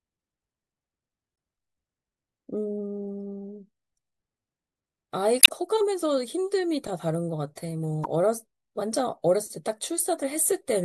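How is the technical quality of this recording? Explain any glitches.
Two short glitches mar the speech, both from damaged data in a compressed stream, at 5.40 to 5.49 s and at 8.02 to 8.06 s. Part of the encoded data there was lost or overwritten, so the decoder misread those frames, lost sync and had to hunt for the next valid frame header. Each event is heard as a brief chirp, squawk, click or short hole cutting into the speech, the first lasting under a tenth of a second and the second about half that.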